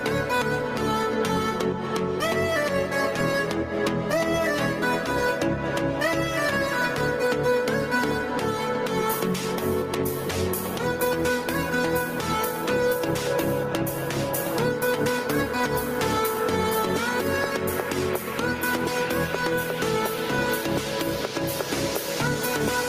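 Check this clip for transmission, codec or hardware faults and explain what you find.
One fault runs through the whole clip. Gain pumping, throughout: the input gain is likely set far too high, so a fast limiter repeatedly clamps down, making the gain swing by roughly 10 dB around each loud sound.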